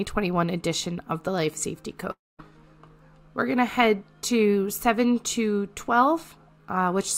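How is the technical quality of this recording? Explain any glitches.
The recording has one clear glitch, a long network dropout between 2.11 and 2.41 s. The sound at 2.11 s is stretched into a short buzzing tail that fades, then about 0.22 s of silence follows before the audio resumes. The likely cause is an interruption in the incoming stream. The receiver concealed the gap by extending the last sound it had, then gave up and output silence. When playback picks up again, roughly 0.28 s of material is absent rather than delayed, so the audio jumps ahead instead of continuing where it stopped.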